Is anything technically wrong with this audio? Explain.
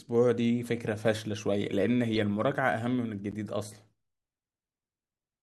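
Yes. Corrupt frames were decoded at 2.15–2.18 s and 3.31–3.34 s: bit errors misplaced energy across a few frames, producing brief noisy blips peaking around -25 and -30 dBFS.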